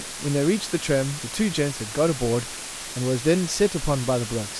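Low bit depth with dither runs throughout this speech clip: a steady, even hiss sits about 10 dB below the voice with no distortion, which fits dithered rounding to about 5 bits.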